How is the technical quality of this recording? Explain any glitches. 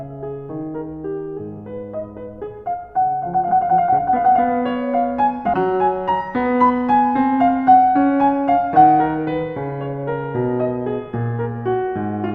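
The recording has one glitch, a stream segment skipped in the music from 5.53 to 5.56 s. One segment likely failed to load and the player moved to the next, so the music jumps ahead abruptly with a brief blip.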